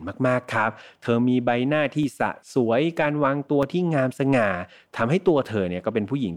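From 0.44 to 5.22 s, about four clicks recur every 1.59 s, likely clock drift buffer slips from roughly a 200 ppm clock mismatch; unlike random dropouts, they keep a steady rhythm.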